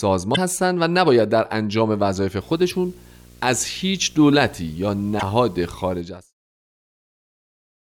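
At 0.33 to 0.38 s the speech breaks up briefly. This is damaged data in a compressed stream. Corrupted bytes make the decoder misread frames and lose sync, so it hunts for the next header. From 2.41 to 6.02 s a video or display buzz sits under the speech, about 25 dB down. A screen or video cable is leaking into the audio. The buzz follows a 60 Hz field rate, with hash above it. Two more corrupted-stream blips land inside it, at 2.68 to 2.73 s and 5.17 to 5.23 s. The clip then fades out smoothly from around 6 s to 6.35 s.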